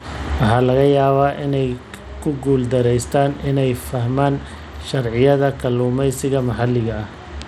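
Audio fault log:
Throughout: Bluetooth SBC compression, likely, with the treble flickering in and out and a gritty, coarse edge on the speech, which fits a starved bit pool around 96 kbps.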